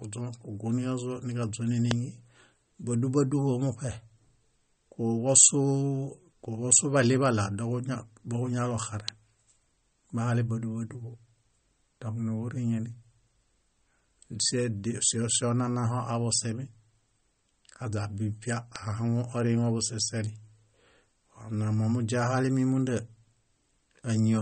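Throughout the speech the sound has the watery, swirling texture of MP3 compression, likely from a low-bitrate encode; the damage is plainly audible, and the thinness fits a rate of around 33 kbps. Nothing reaches above 8.4 kHz, so the encoder has cut the top band entirely. Weak frequency lines drop in and out from frame to frame, leaving s sounds metallic and chirpy and consonant attacks smeared.

At 1.91 s, 9.08 s and 18.76 s, a sharp snap sits on top of the audio, each lasting a millisecond or two. These are electrical switching spikes, most likely a nearby switch or discharge arcing into the line. They are added to the signal rather than interrupting it. The last one lands just before "ahaŋun oriŋe busiseli".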